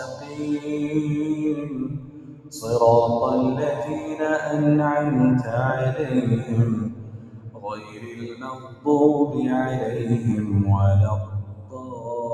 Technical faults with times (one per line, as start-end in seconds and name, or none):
0.00-12.33 noise suppressor applied to music or sounds
0.09-0.69 sound cut by the noise suppressor
1.56-2.59 sound cut by the noise suppressor
6.90-8.86 sound cut by the noise suppressor
11.43-12.09 sound cut by the noise suppressor